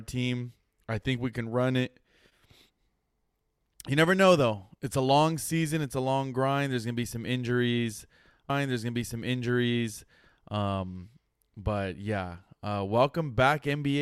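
At 8.50 s, just after "gonna be some injuries", a stream segment is repeated: about 2.0 s replays until 10.48 s, showing as a duplicated waveform block with a click at the jump.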